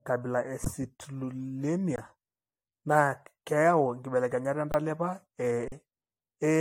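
Throughout, the speech sounds swirly, smeared and hollow, with nothing above 16.6 kHz. This is likely generation loss from about five passes through an AAC-style codec.

Underruns with held sample occur at 0.65 s, 1.96–1.98 s, 4.72–4.74 s and 5.68–5.72 s. Each time the buffer ran dry, the output froze flat until data returned.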